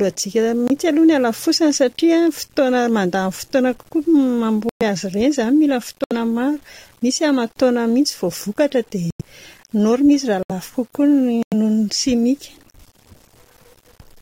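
From start to finish the speech carries a grainy roughness. It tracks the voice. Quiet syllables and word endings turn gritty, and soft tails break up instead of fading smoothly. The noise sits roughly 35 dB below the speech. The likely cause is low bit depth without dither. The coarseness points to about 8 bits, with values simply rounded. The error is tied to the signal, so it shifts as the voice shifts.

Then come abrupt holes. The first runs from 0.67 to 0.71 s, just before "aloha ny halafosany satria". Others follow at 4.69 to 4.83 s, 6.04 to 6.13 s, 9.10 to 9.21 s, 10.43 to 10.51 s and 11.43 to 11.54 s. Each is a corrupt frame muted. Damaged compressed frames were rejected by the decoder and replaced with silence. The sound cuts out sharply for a few frames' worth. Timing stays intact.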